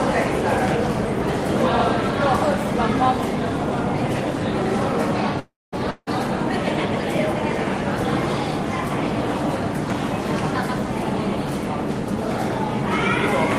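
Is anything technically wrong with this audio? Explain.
Yes, there are two interruptions in this recording of everyday sounds.

From 5.39 to 5.74 s there is a call audio freeze. The last sound is stretched out as a fading buzz or hiss that dies into about 220 ms of silence. The sound then picks up exactly where it stopped, so nothing is skipped, but everything afterwards runs about 331 ms late. The likely cause is packets held up in transit until the receiver's jitter buffer ran dry and it had to fill the wait itself.

From 5.90 to 6.09 s there is a long network dropout. Again the last sound is carried on as a fading buzz or hiss, ending in about 40 ms of silence. When the audio returns, it has jumped ahead: about 160 ms of the original is gone. This likely comes from packets that never arrived at all, so the receiver covered the gap and then moved on without the lost stretch.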